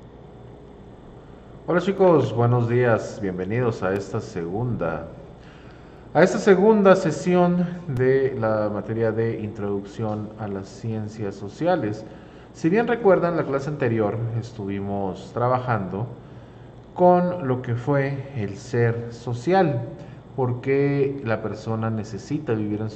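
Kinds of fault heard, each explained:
Periodic USB or driver dropouts: Something repeatedly stalls the audio path at a fixed interval, and each time a tiny piece of sound vanishes. Here the gaps are filled with silence and last only a few milliseconds. They repeat every 2.0 s, about four times, between 1.98 s and 7.97 s. Each one is heard as a brief tick or pop cutting into the sound, evenly spaced like a slow clock.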